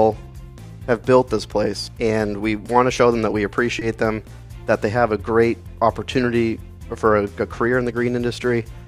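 A short concealed packet loss occurs at 3.79 to 3.83 s: about 20 ms of audio never arrived, and the decoder filled the gap by extrapolating the preceding sound, leaving a brief smear.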